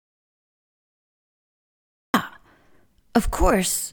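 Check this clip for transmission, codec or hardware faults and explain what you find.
There's one fault here: an audio dropout to silence covering the opening of the clip. From the very first sample up to about 2.14 s there's nothing at all, not even room tone, so the gap reads as plain silence rather than a quiet room. The input was likely lost for that stretch, through a disconnected device, a broken link or a mute left on, while the recorder kept writing. The sound then comes in abruptly at 2.14 s, already mid-flow, and whatever preceded it is gone.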